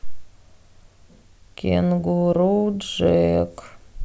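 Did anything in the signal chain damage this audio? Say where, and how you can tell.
No, none of the signal chain's stages leave an audible mark on this speech recording, so there is no point of damage to locate.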